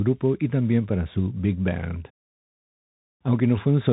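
Throughout, the speech went through a Bluetooth CVSD headset codec. Its one-bit delta coding stops near 3.8 kHz, leaving scratchy s sounds and granular hiss.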